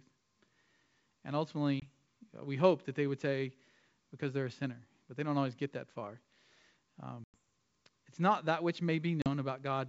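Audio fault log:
1.80–1.89 s, 7.24–7.34 s and 9.22–9.28 s, packet loss on an ADPCM call: the sound drops to silence for about 20, 100 and 40 ms, which fits one, five and two lost packets of 20 ms each. Afterwards, the decoder's predictor and step size no longer match the sender's, so the sound returns slightly distorted before settling within tens of milliseconds. On a spectrogram, each gap is a sharp-edged blank column across the full G.722 band up to 7 kHz. On the waveform, each gap is a flat line.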